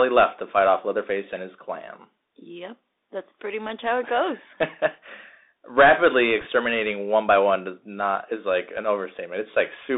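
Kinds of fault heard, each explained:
Bluetooth CVSD headset codec: The whole clip runs through the narrowband headset codec, which sends one bit per sample at 64 kHz, each bit just nudging the waveform up or down while the step size adapts. Here the speech sits in a band of roughly 250 Hz to 3.7 kHz, so it sounds boxed-in and phone-like. The codec damage is plainly audible: scratchy s sounds, a granular hiss under the speech, and roughness on louder, brighter moments.
Bit errors on a Bluetooth voice link: From about 6.41 to 6.46 s, some 50 ms, flipped bits on the headset link add a short burst of rushing, crackly noise. Because every CVSD bit carries the same small weight and the errors fade out quickly, it doesn't pop or click. It's more a brief smear of grit over the speech, consistent with an error rate of around one and a half percent.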